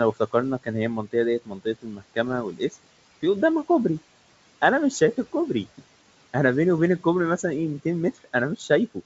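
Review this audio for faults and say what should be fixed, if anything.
Speech cut by the noise suppressor at 1.45–1.66 s, 1.82–2.18 s and 2.52–2.85 s. Stretches of speech were treated as noise and pulled down by about 17, 18 and 19 dB, leaving them swallowed and faint. Prevent it by lowering the suppressor's aggressiveness so quiet speech over room noise about 20 dB down is passed intact.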